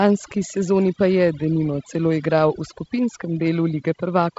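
The speech runs throughout with the background pressed down and flecked with twinkling specks. This is overdone noise removal: the reduction was set so aggressively that bands near the estimated noise floor were cut almost completely, taking quieter parts of the voice with them. The wideband telephone coding, G.722, adds a light hiss, and nothing reaches above about 7.7 kHz. Its slightly noisier lower band fits the 48 kbit/s mode.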